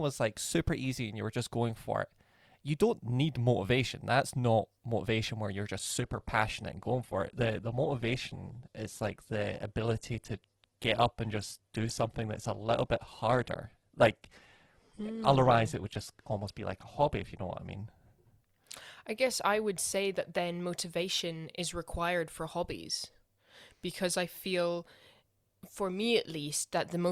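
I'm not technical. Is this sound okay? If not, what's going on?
No. From 5.79 s to 17.79 s there's an adaptive stream at a lower bitrate. The connection slowed, so the player switched to a lower-quality copy. The speech turns dull, with more codec artefacts, with nothing above 12.2 kHz. It switches back sharply, without any gap.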